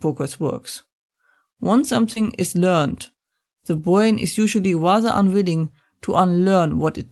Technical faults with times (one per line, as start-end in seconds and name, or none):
2.13-2.18 short concealed packet loss